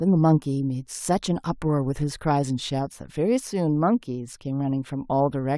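Nothing in this speech recording reveals a technical fault.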